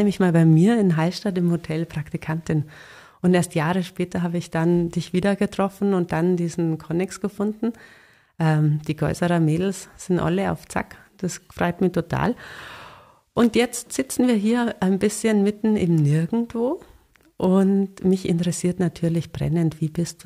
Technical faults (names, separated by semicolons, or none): bit error spike